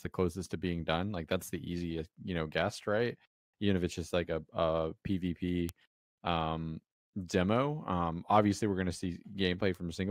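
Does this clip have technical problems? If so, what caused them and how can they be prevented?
Yes. This speech clip has two bit error spikes, sharp isolated ticks at 5.69 s, just before "um demo", and at 9.75 s. The first is a single sample peaking at about -13 dBFS; the second spans two samples at about -31 dBFS. A flipped bit makes a sample's value jump by a power of two and then snap back. Unlike a dropout or an edit click, the waveform's shape on either side is untouched and the tick bears no relation to the speech. Error-checked memory and links, such as ECC RAM and checksummed or shielded digital connections, prevent it.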